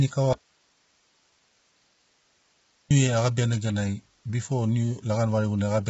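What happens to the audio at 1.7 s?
At 1.7 s the speech is gone: an audio dropout to a faint residue runs from 0.33 s to 2.91 s, about 2.58 s in all. The signal was likely lost upstream while the path stayed live, so only hiss remains, roughly 40 dB down. On a waveform it is an abrupt cut to a thin flat band; a spectrogram shows speech energy stopping dead and a pale noise floor across the gap.

Low-delay AAC compression also runs through this moment, as it does through the whole clip. The rough, grainy texture is likely from AAC-ELD at a low rate that fits about 16 kbps, whose short frames smear the harmonics. A spectrogram shows a hard ceiling with nothing above 7.7 kHz and noisy fill between the harmonic lines.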